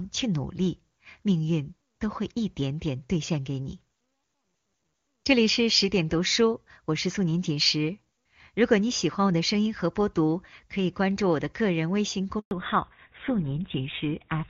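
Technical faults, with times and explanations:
12.39 to 12.51 s, handover gap: the speech cuts out for about 120 ms, dying away fast rather than fading, then silence until the link comes back. That's the call being passed from one network to another, with no speech frames getting through while the switch happens, so whatever was said in that slice is simply gone. It isn't masked or smoothed over, which is why it lands as a clean hole in the speech.
12.51 s to the end, fallback to narrowband: right after the gap the speech loses everything above 4 kHz, so it turns duller, boxier and rougher for the last couple of seconds. Before the switch you can hear the airy top end of HD Voice, clear enough that it fits AMR-WB running near its top rate of about 23.85 kbit/s. The new link has dropped to an older narrowband codec, most likely GSM full rate at around 13 kbit/s.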